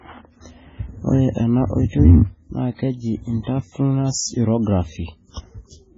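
A speech recording carries heavy MP3 compression from start to finish, and that is the likely cause of its watery, swirling texture. Everything above 7.6 kHz is gone, so s sounds lose their sparkle and turn metallic and chirpy, while onsets smear. On a spectrogram this shows as a hard flat ceiling at 7.6 kHz, with patchy holes below it where weak bands flicker on and off between frames. The damage fits a very low bitrate of around 16 kbps.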